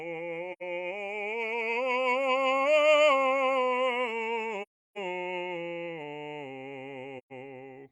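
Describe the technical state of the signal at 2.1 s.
At 2.1 s the music plays through intact, with no dropout, distortion or other technical fault at that moment.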